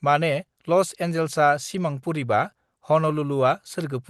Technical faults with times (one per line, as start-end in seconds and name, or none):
none